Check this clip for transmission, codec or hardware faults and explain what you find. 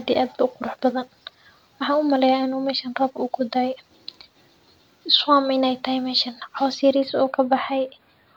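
There is one fault: channel delay (comb filtering) from 6.96 s to 8.36 s. One channel trails by a few hundredths of a millisecond, and summing to mono cancels a fixed notch near 7 kHz, giving the speech a hollow, phasey sound. Unlike low-pass filtering, energy returns above the notch. Unlike flanging, the notch never moves.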